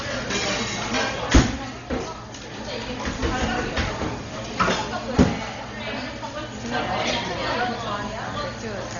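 A recording of everyday sounds, dull throughout with rough, fluttering noise around tonal parts and nothing above 7 kHz, likely Dolby Digital compression at a very low bitrate, roughly 32 kbps. A spectrogram shows a hard ceiling at 7 kHz and speckled noise filling gaps between components.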